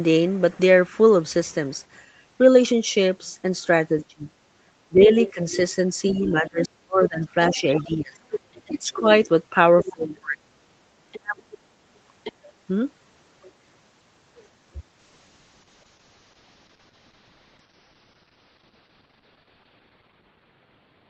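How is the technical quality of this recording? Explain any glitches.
The recording has three kinds of call fault: the talker's speech gets pushed down while both sides talk, a second voice bleeds in underneath, and the final stretch turns coarse and dull.

From 4.08 s to 11.42 s, the talker's speech repeatedly sinks and breaks up, falling by about 30 dB at its deepest and affecting roughly three seconds of speech in total. This is speech suppressed in double talk. With both parties speaking at once, the echo canceller likely could not tell the talker from the loudspeaker echo, so it attenuated everything it heard and took the wanted speech down with the echo.

A faint second voice sits under the talker from 5.2 s to 9.93 s at about 15 dB below the speech, and returns from 11.12 s to 12.52 s at about 20 dB below. This is the other side's voice leaking through. The far party's audio, played on the talker's loudspeaker, was likely not fully cancelled from the microphone signal, so remnants of it were sent back along with the talker's speech.

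From 15.03 s to the end of the clip, the speech becomes rougher and more muffled. This is a call bitrate drop. The Opus encoder went from 32 kbps to 8 kbps and stayed at the lowest rate for about 5 s. At that rate it codes the signal coarsely and lowers the audio bandwidth from 8 kHz to 6 kHz, which strips out sibilance and detail. Before this point, the 8 kHz top end is the normal limit of the call path.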